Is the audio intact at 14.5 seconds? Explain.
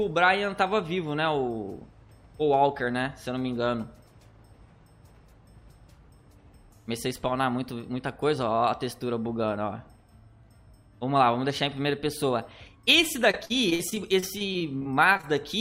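No. Repeated packet loss (robotic sound) spans 13.31–15.25 s: fifteen gaps up to 46 ms, each patched with continued sound, making choppy robotic stutters rather than one dropout.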